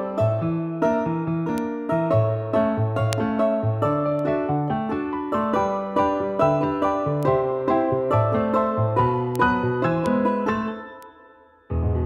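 Seven isolated ticks mark this audio as carrying bit error spikes, at 1.58, 3.13, 4.19, 7.23, 9.36, 10.06 and 11.03 s. Each is a single flipped bit that throws one to three samples by a power of two before snapping back, peaking from about -25 dBFS up to about -1 dBFS at 3.13 s. The waveform shows a lone needle only a few samples wide; the spectrogram shows a thin vertical line spanning all frequencies, unrelated to the surrounding signal.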